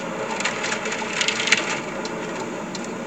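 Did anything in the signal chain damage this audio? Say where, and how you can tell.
No, nothing in this recording of sounds points to damage at any stage of the chain, from capture through to playback.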